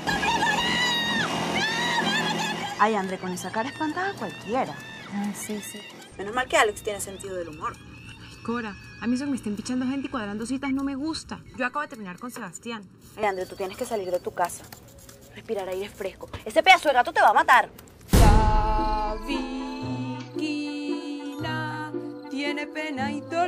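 From 7.23 to 13.23 s, channel delay causes comb filtering: one channel lags by under a millisecond before mono summing, cutting fixed notches from around 700 Hz upward for a hollow, phasey sound.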